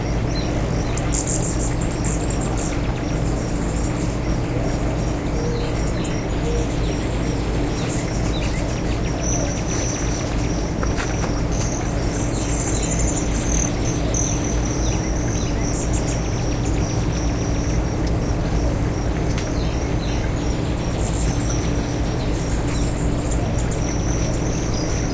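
No technical faults are audible.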